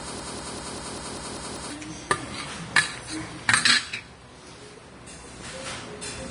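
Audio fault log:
0.00–1.70 s, broken-record loop: The stream likely stalled and kept resending its last held fragment, already under way when the clip opens. A piece of about 195 ms repeats exactly, back to back, eight times, and the sound that belonged there is lost.
Throughout, Vorbis compression: A low-quality Vorbis encode, likely near 32 kbps, cut the band and coarsely quantised the treble. Nothing remains above 10.6 kHz, and fine upper detail turns to grainy hiss of similar energy, roughening tones and blurring attacks audibly.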